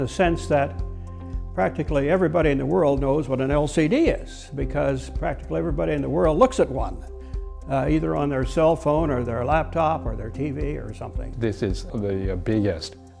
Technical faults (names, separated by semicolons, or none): none